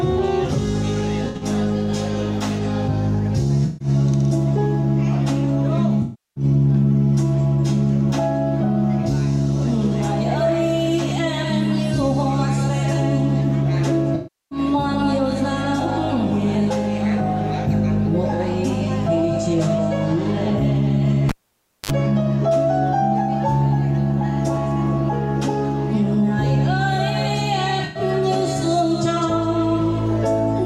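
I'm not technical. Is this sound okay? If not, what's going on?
No. There are two kinds of problems.

The first is AAC frame loss with concealment. Small chunks of the compressed audio went missing. The player guessed what should be there by reusing the last good sound. Each gap becomes a brief smeared, noisy or phasey patch. It happens at 1.24 to 1.45 s, 3.65 to 3.88 s, 6.02 to 6.44 s, 14.15 to 14.59 s and 27.84 to 28.03 s. The gaps at 6.0 and 14.1 s are the longest, each about a third of a second.

The second is a cable pulled and plugged in, from 21.29 to 21.91 s. A live cable came out and went back in. You hear a pop, then near silence for just over half a second. Then there is a short burst of low 50 Hz mains buzz as the plug touches, and another pop when the sound returns.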